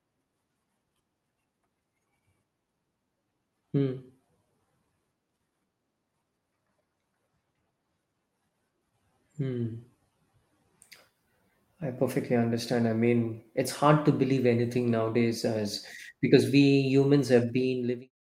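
No technical faults are audible.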